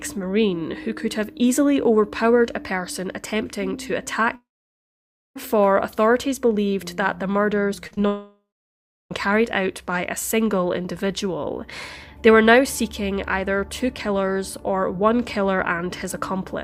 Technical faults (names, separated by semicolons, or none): long network dropout; short concealed packet loss